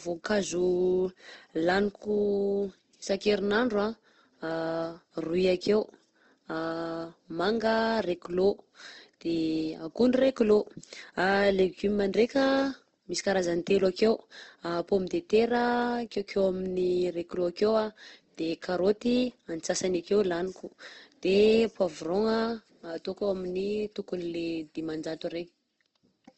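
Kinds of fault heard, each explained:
Opus compression: The speech is band-limited, with nothing above about 8.2 kHz, and plainly audible codec damage throughout: tonal parts of the sound turn grainy, rough and noisy instead of swirling. This is likely Opus coding in its music (CELT) mode at a low rate, which fits roughly 16 kbps, where the encoder keeps each band's energy but fills starved bands with folded or noise-like content and narrows the bandwidth to wideband.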